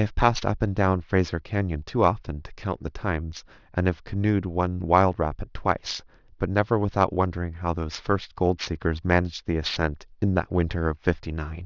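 A speech recording with aliasing from start to finish. Sibilants sound gritty and metallic rather than crisp. The spectrum runs hard up to a band edge at 6 kHz, which fits a drop from 24 kHz to 12 kHz sampling. The rate was lowered without first filtering out content above 6 kHz. That energy folded back below the edge into false, unrelated tones. The folded components sit roughly 20 dB under the speech.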